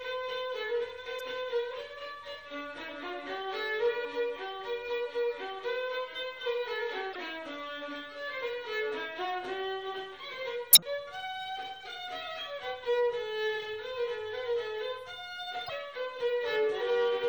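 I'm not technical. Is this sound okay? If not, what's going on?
No. Throughout, the sound is watery and swirly with a dull top end, most likely from heavy MP3 compression squeezing the file too hard. There's also damaged data in a compressed stream: short chirps or blips at 1.17 to 1.21, 4.04, 7.12 to 7.16, 10.73 to 10.82 and 15.66 to 15.70 seconds.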